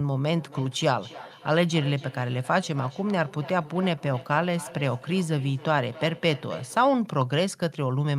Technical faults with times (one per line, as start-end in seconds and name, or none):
0.33-7.03 feedback echo between two devices